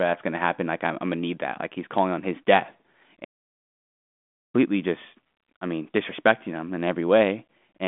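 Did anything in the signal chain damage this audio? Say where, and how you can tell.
Yes. At 3.24 s the speech cuts off in mid-flow and the output falls completely silent until 4.56 s, a gap of about 1.3 s, before the sound resumes. This is a playback stall. Its likely cause is the player running dry of buffered data or its output thread being blocked, so the device had nothing to send until it recovered. The telephone band behind it, roughly 200 Hz to 3.5 kHz from the 40 kbit/s G.726 link, stays clean either side of the gap.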